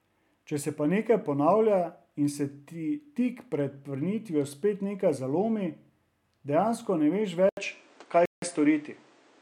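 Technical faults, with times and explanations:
7.49 to 9.41 s: input switched to a poorer device. An 80 ms gap opens, then the sound turns duller, with nothing above 9.6 kHz. Level shifts by around 5 dB, and new background noise sits roughly 35 dB down. Likely a change to another microphone with narrower bandwidth.
8.26 to 8.42 s: Bluetooth stall. The sound drops to silence for 167 ms, then resumes. Likely interference delayed wireless packets, so the headphones' buffer emptied. Playback waited until the resent data arrived, leaving this clean hole in the audio.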